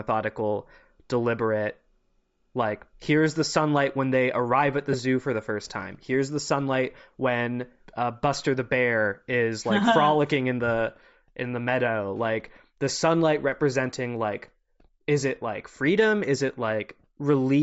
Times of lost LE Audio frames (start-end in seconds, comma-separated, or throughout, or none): 4.93